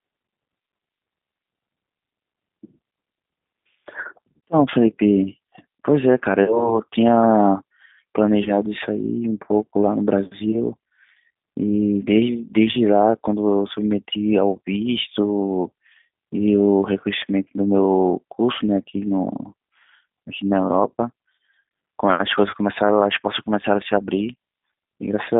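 Throughout, the speech passes through the G.729 codec at 8 kbit/s, which models the voice from a filter, pitch and sparse pulses and keeps only about 150 Hz to 3.6 kHz, leaving it narrow, rough and synthetic. VoIP packet loss concealed by the speech codec follows at 6.44–6.78 s, 8.44–8.51 s, 20.89–20.91 s and 22.50–22.55 s, when roughly 40, 20, 10 and 30 ms of audio went missing. The decoder stretches its last frame into a fading buzzy tone or coloured noise, and the speech stays weak briefly afterwards.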